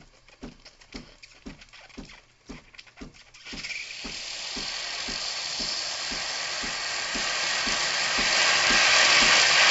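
No faults can be heard anywhere in these sounds.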